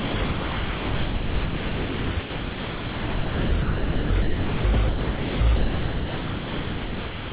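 From 0 to 0.14 s, 0.24 to 2.1 s, 2.2 to 3.52 s, 3.62 to 4.1 s, 4.22 to 4.64 s, 4.74 to 4.76 s, 4.88 to 5.4 s and 5.56 s to the end, the sound is dropped by the voice detector and replaced with steady comfort noise, likely because the detector mistook it for background. Unlike packet loss, the gaps fill with even hiss rather than clicks or stutter, and all of it, including the brief returns of the real sound between gaps, is band-limited to about 4 kHz by the call codec.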